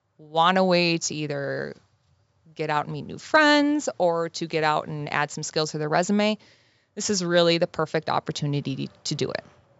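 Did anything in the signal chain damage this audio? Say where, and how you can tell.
No, nothing in this speech stood out on listening as damage from any stage of the chain, and the call microphone processing it passed through, with its ceiling at 8 kHz and the lowest bass trimmed away, is working as intended.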